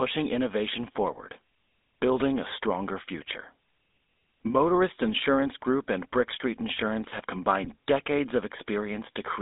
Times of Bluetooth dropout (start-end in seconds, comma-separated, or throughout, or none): none